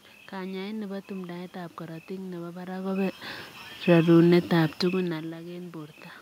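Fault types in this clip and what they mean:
No system faults in the speech; the background noise is room noise at the microphone, and the level shifts around 2.5 s and 4.5 s are the talker moving relative to the mic.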